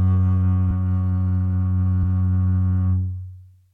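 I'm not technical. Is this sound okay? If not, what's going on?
No. There are compressed frames skipped at about 0.7 s in this music. The recording is stored in small blocks of roughly 23 ms each. Around ten of those blocks were missing or refused by the player as damaged, so about two tenths of a second of music never plays and the sound jumps ahead.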